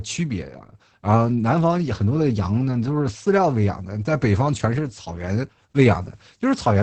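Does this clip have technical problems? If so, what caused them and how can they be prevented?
Yes. Opus voice compression runs throughout. Nothing remains above 8.7 kHz. The speech sounds muffled and hoarse, which fits a low SILK bitrate near 10 kbps. Prevent it by encoding at a higher bitrate.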